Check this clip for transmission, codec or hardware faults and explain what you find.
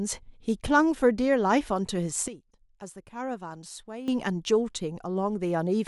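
There's one fault: a sudden gain jump. From 2.28 to 4.08 s the speech and background drop together by about 12 dB, with no ramp. That's likely a gain change applied between one sample and the next.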